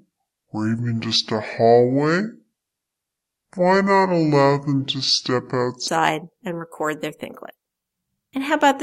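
From 0.00 to 5.88 s the speech is a section at the wrong speed, playing at 0.628 times normal, likely from a wrong clock. Pitch falls about seven semitones and delivery drags together, unlike a pitch shift, returning to normal at "and record their thinklet".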